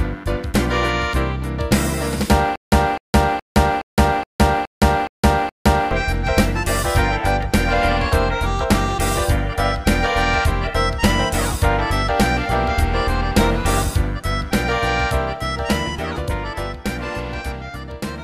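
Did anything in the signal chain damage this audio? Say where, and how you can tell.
Yes: a stutter with silent gaps from 2.56 to 5.91 s, where a 254 ms fragment repeats eight times with 165 ms of digital silence between, likely a stalled playback buffer.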